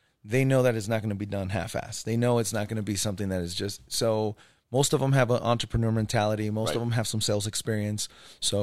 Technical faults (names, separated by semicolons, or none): none